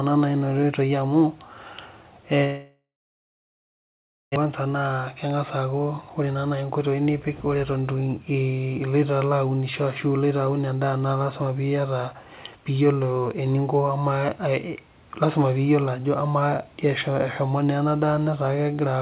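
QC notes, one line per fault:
2.44–4.38 s, long network dropout: the audio carries on for a moment as a fading buzz that stretches the last sound, then goes to about 1.5 s of silence before returning at 4.38 s with about 1.6 s of material simply gone. This is likely a long packet loss that the receiver first concealed and then gave up on. On a waveform the envelope decays into a flat line. On a spectrogram a smeared, fading band gives way to an empty gap. The band never reaches above 4 kHz, since the G.711 mu-law call path cuts everything there.
4.45–7.82 s, jitter buffer speed-up: right after the gap the sound runs about 8% fast at unchanged pitch and feels hurried. The buffer had built up roughly 300 ms of extra delay around the dropout. To shed it, the receiver cut out short pitch-period slices again and again, removing roughly that much in total. On a waveform the periodic cycles keep their spacing, with small seams where slices were removed. 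On a spectrogram the harmonics stay level while the syllable-scale patterns are compressed in time.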